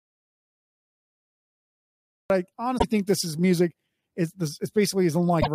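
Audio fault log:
0.00 to 2.30 s: audio dropout to silence. The clip opens already in this state. For the first 2.3 s there is silence, with no room tone or hiss at all. Speech then starts abruptly, mid-flow. Total silence like this points to lost input, with the recorder still writing silence. The likely cause is a disconnected device, a failed link or a stray mute. Anything said during the gap is gone.
2.75 to 2.84 s and 5.39 to 5.48 s: damaged data in a compressed stream. Each event is a brief glitch of about 90 ms that breaks into the speech. The first comes just before "think this is music". The second falls near the very end. Corrupt bytes in the compressed stream make the decoder misread its frames. It loses sync and must hunt for the next frame header. That produces the glitch.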